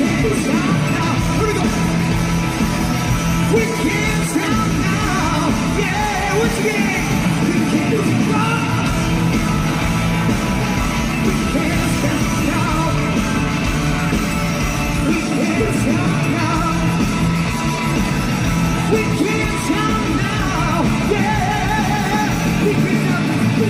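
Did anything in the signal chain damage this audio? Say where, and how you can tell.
No, nothing audible points to damage at any stage of the chain.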